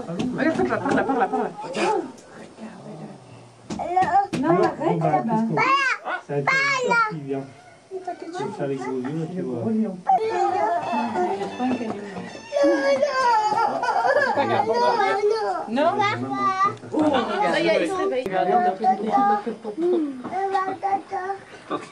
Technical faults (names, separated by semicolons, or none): none